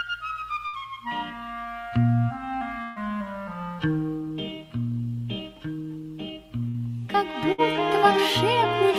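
Bursts of packet loss at 0.67, 2.83, 6.68 and 7.52 s: about 60 ms is skipped each time (120 ms at 2.83 s), and the gap is filled with a fading continuation rather than the silence of a plain dropout.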